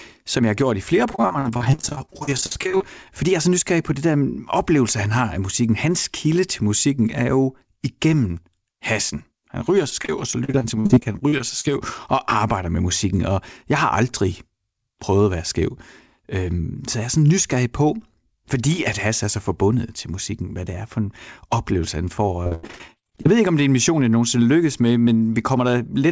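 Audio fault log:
1.11–2.83 s, 9.90–11.65 s, 22.44–23.31 s: repeated packet loss (robotic sound). The first run starts right after "har gjort i flere". The third sits between "for en oplevelse han" and "ved ikke om det". Packets kept going missing in quick succession. Each hole was filled by stretching the last bit of sound. The speech turns choppy, with pieces missing. About 41%, 23% and 47% of each run is patched. Most holes last up to 49 ms, and the third run has one of 84 ms. The call codec's band limit at 8 kHz holds throughout, which fits G.722 at 64 kbps.
3.11–3.55 s: jitter buffer speed-up, ending just before "på det". Audio had piled up in the buffer beyond its target. The receiver trimmed short pitch-period slices, one after another, to cut the delay. About 40 ms went in total. The speech runs at 107% speed with its pitch unchanged. It sounds briefly hurried.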